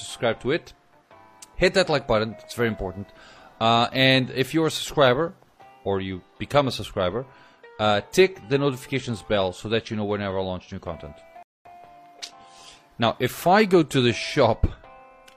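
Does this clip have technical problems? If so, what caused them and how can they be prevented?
Yes. A rebuffering stall runs from 11.43 to 11.66 s. The player exhausted its downloaded audio and paused until more arrived. The sound drops to silence, then resumes exactly where it stopped. About 0.23 s is added, nothing lost. A larger playback buffer or steadier connection prevents this.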